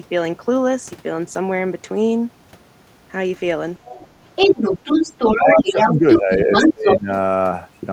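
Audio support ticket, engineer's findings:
Echo canceller likely leaving residual far-end echo in the mic path: other side's voice leaking through. Faint at 3.85–4.07 s, well under the talker. Then at 4.36–5.92 s and 6.11–6.97 s, roughly as loud as the talker or a little louder.

Double-talk handling likely misjudging near-end speech as echo: speech suppressed in double talk. At 5.37–6.51 s the talker dips around 10 dB in patches totalling under a second. At 6.73–7.09 s it drops much deeper, close to cut out.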